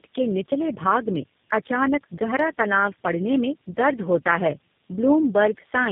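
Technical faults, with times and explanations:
Throughout: tandem speech coding. The speech is rough, muffled and warbly, with nothing above 3.6 kHz. The sound points to three low-rate speech codecs in a row, which fits AMR-NB at 7.4 kbit/s, then GSM full rate at 13 kbit/s, then G.729A at 8 kbit/s, joined by 64 kbit/s G.711 links. At each border the audio is decoded and coded again. Each coder then models the previous coder's errors as if they were speech. So the damage builds up.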